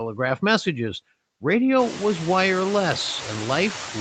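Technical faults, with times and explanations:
Throughout, noise suppressor artifacts: gaps get pulled down about 22 dB, so the background pumps up under speech, more noticeably once room noise jumps near two seconds.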